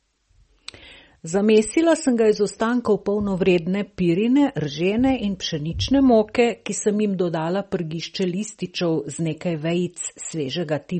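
Throughout, likely MP3 compression at a low bitrate: treble stops sharply near 8.4 kHz, a flat ceiling on the spectrogram, with flickering weak bands that give the speech a watery, swirly texture.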